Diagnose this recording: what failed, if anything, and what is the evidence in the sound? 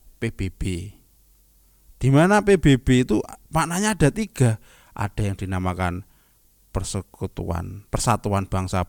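Nothing failed; no fault is audible in this recording.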